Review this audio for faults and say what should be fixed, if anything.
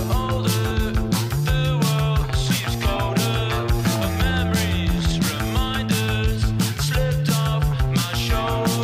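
Damaged data in a compressed stream at 0.70 s and 2.95 s: corrupted frames make the decoder lose sync, producing brief blips. Prevent this by checksumming files and transfers and re-fetching damaged segments.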